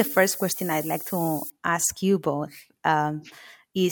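From 0.0 to 1.5 s, low bit depth with noise shaping, consistent with about 6-bit samples, pushes rounding error upward, leaving a steady, thin hiss rising toward the treble, only about 10 dB below the speech.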